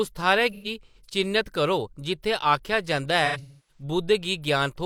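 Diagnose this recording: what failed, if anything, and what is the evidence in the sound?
Codec stage: AAC frame loss with concealment. From 0.52 to 0.97 s, just before "चि'न्नत करो", and from 3.25 to 3.83 s, the speech smears into a phasey, noisy hold, fading in the second, longer run of roughly 300 ms. The decoder repeated the last good spectrum, with scrambled signs or interpolated energy. A spectrogram shows blurred, frozen bands; the waveform shows a decaying envelope.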